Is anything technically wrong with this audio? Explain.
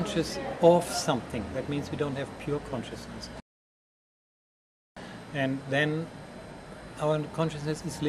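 Yes. A playback stall runs from 3.40 s to 4.97 s. The sound halts mid-flow and the output drops to silence for about 1.56 s, then picks up again. The likely cause is the player running short of buffered data, or its playback thread being held up, so nothing reached the output until it recovered. On a waveform this shows as a flat line, and on a spectrogram as a blank vertical band with abrupt edges on both sides.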